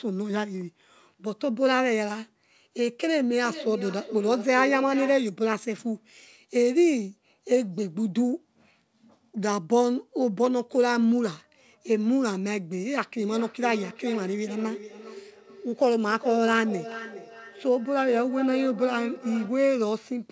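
Feedback echo between two devices appears from 3.35 to 5.37 s and again from 13.17 to 19.67 s: a second device's playback reaches the other microphone, so each word returns roughly every 0.4 s, peaking about 12 dB and 13 dB below the speech, thinner and ringing.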